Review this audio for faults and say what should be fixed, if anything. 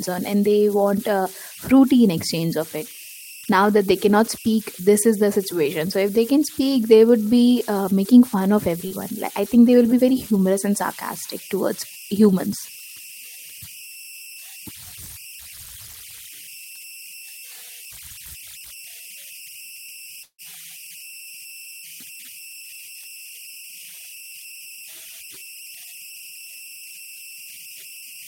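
Under the whole recording there's a whistle at roughly 3 kHz, sitting about 20 dB below the speech. It's easiest to catch in the pauses, and under the quieter syllables it turns into a grainy texture. That's converter idle tones: with no dither, the delta-sigma converter settles into a repeating bit pattern whenever its input is small, and that pattern comes out as a steady tone. Adding dither at the converter, or using an interface that already applies it, should clear it.

At 8.87 to 8.94 s there's a short concealed packet loss. About 40 ms of audio never reached the decoder in time, and the receiver papered over roughly 31 ms of it by extending the last bit of speech before blending back into the real signal. You hear it as a quick smear or wobble right there. A slightly deeper jitter buffer, or forward error correction on the link, would cover gaps this small.

From 20.23 to 20.41 s there's a longer hole, most likely a network dropout. 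About 160 ms is missing. For around 158 ms of it the receiver kept the previous sound going, so it comes across as a buzz or hiss that fades out, and close to 70 ms of that stretch is near silence. The speech then picks up again with that chunk simply gone. A more stable connection, or redundancy so the lost stretch can be recovered, is the fix here.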